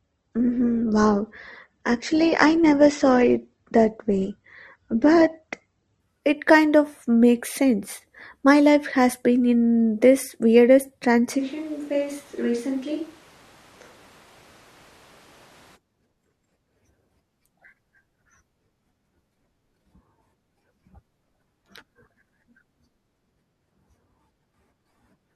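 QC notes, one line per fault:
0.0–6.0 s, adaptive stream starting at a low bitrate: the opening is dull and smeared, with nothing above 8.2 kHz and obvious codec artefacts, which fits a low-rate Opus stream around 16 kbit/s. At 6.0 s, just before "it kind of makes", the quality jumps with no gap, consistent with a step to roughly 64 kbit/s once the player had measured the connection. Unlike a mic change, the room sound and level stay the same and only clarity and treble return.
11.41–15.75 s, switch to a distant microphone: right after "been in this weirdest" the sound abruptly turns roomy and hollow, loses bass, drops by about 5 dB, and room noise rises to roughly 25 dB below the speech. The likely cause is the close microphone dropping out and a farther one, such as a camera mic, taking over, before an equally sudden return at 15.75 s. Unlike the low-bitrate start, treble isn't cut and there are no codec artefacts. 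What changes is distance and reverberation.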